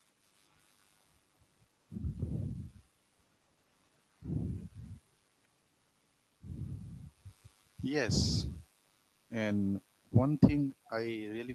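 From 10.7 to 10.9 s a very faint copy of the speech returns 269 ms behind the original. This is an echo leak, likely a far-end loudspeaker whose echo canceller let part of its microphone pickup back into the call.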